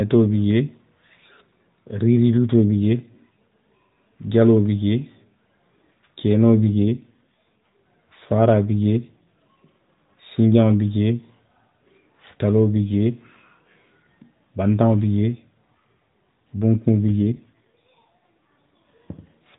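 From 6.70 to 7.87 s, between "kenoo bi" and "faaraa bi jee", and again from 17.08 to 18.54 s, an AMR rate drop roughens the speech into a buzzier, synthetic tone, consistent with 12.2 falling to 5.9 kbps. The waveform shows no gap, and the spectrogram keeps its 4 kHz ceiling, but the harmonics blur.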